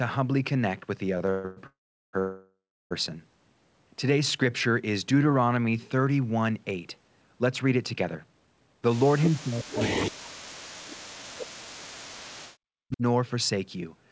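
Repeated stalls (stutter) run from 1.18 to 1.59 s. Packets arrived late again and again, so the jitter buffer emptied four times. The receiver stretched the last sound to fill 287 ms, with the longest gap 136 ms. Nothing is lost, but the speech drags and stutters.

A call audio freeze follows from 1.67 to 2.15 s, and another from 2.19 to 2.93 s. The likely cause is packets held up in transit that left the jitter buffer empty. Each time the last sound is carried on as a fading buzz or hiss and then silence, about 380 ms in the first and 300 ms in the second. Speech resumes where it stopped, so 465 ms and then 716 ms of delay are inserted.

A jitter buffer slow-down runs from 4.43 to 6.06 s. The buffer was running low or had just raised its target delay, so the receiver repeated single pitch periods to rebuild its reserve. This adds 170 ms and plays the speech at 90% speed. The pitch is unchanged, and sounds are drawn out.

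A jitter buffer speed-up from 8.05 to 9.05 s works the other way. The buffer held more than its target, so short pitch-period slices were cut out, removing about 150 ms. The speech runs at 113% speed with its pitch unchanged and sounds hurried.

Speech suppressed in double talk appears from 9.25 to 11.37 s and again from 11.84 to 13.02 s. This is likely the echo canceller, unable to tell the talker from loudspeaker echo while both sides spoke, turning the signal down. The voice dips by up to about 40 dB or drops out in pieces, across roughly 2 s and then 1 s. Throughout, the 64 kbps G.722 call path leaves nothing above 8 kHz.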